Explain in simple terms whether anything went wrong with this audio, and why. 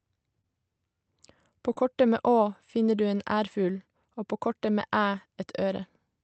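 Two brief dropouts, each a case of short concealed packet loss, occur at about 0.41 to 0.45 s and again at 1.73 to 1.77 s, just before "kortet med". Each time, about 20 ms of the speech failed to arrive over the call link in time. The receiving end covered the gap by extending the preceding sound for roughly that long, then blended back into the real audio. You hear a short smear or wobble, and a brief sound may be lost.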